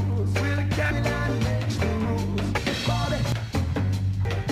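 Compressed frames skipped at 0.91 s, 2.58 s, 3.32 s and 4.25 s: each time the audio jumps ahead, losing about 0.7 s at the first two points and about half a second at the last two. Whole blocks of coded audio never reach the output, so playback leaps forward in steps that fit a frame length of about 93 ms.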